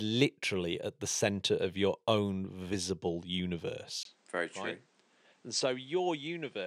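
Speech, with a sudden change at 4.03 s that lasts to the end. A 20 ms gap comes first. Then the sound dulls, with nothing above 9.8 kHz, drops about 10 dB, and gains new background noise about 30 dB below it. The likely cause is input switched to a poorer device.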